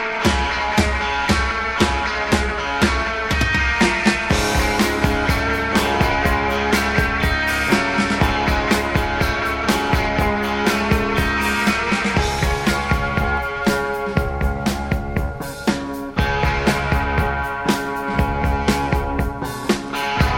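No technical faults are audible at any point in the signal.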